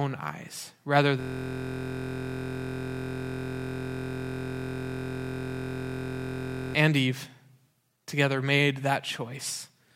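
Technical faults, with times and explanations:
1.21–6.74 s, system hang loop: a 23.22 ms slice of speech repeats exactly, hundreds of times, as a steady 43.1 Hz buzz, which fits a stalled driver cycling a 1024-sample buffer. The spectrogram shows a flat comb of 43.1 Hz harmonics, and the waveform repeats identically.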